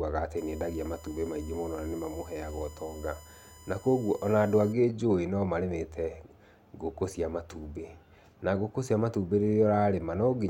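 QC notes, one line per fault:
0.37–4.73 s, USB whine: a fixed-pitch tone on a 1 kHz fundamental with its strongest component at 7 kHz, about 25 dB below the speech. The 1 ms USB frame rate modulates current draw, which leaks into the audio path through shared power or ground.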